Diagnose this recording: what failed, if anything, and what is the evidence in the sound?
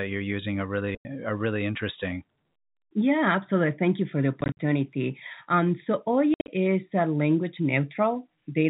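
Packet loss filled with silence at 0.95–1.05 s after "you're using are", 4.41–4.59 s after "you for the" and 6.34–6.48 s before "is a language". This is a network fault: lost packets were replaced with hard-edged gaps, some scattered in short runs, consistent with 10 ms packets.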